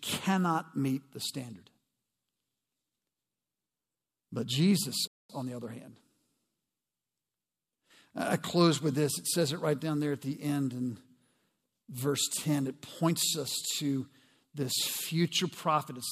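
At 5.07 s the speech cuts to silence mid-flow for about 220 ms, resuming at 5.30 s with "on the other hand". This playback stall is likely the player starving for data or its thread being blocked, briefly halting output.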